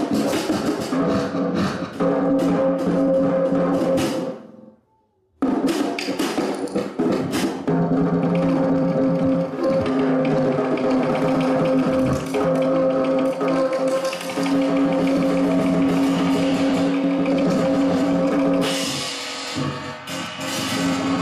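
No technical faults are audible anywhere in the recording.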